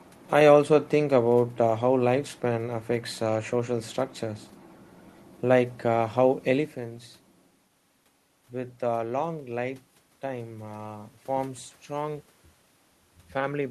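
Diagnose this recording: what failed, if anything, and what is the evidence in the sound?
Nothing failed; no system fault is audible here.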